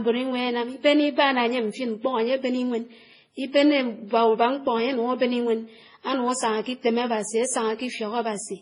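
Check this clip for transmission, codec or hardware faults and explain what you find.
There's one problem, and it runs through the whole clip: transcoding between lossy codecs. Nothing in the speech reaches above 10.5 kHz, and the artefacts of the different codecs are heard together. That mix points to a chain, likely something like a low-rate MP3 around 24 kbit/s, re-encoded to WMA and then to AAC-LC at about 32 kbit/s. Each pass spent its bits re-coding the previous damage, and the lowest cut-off stuck.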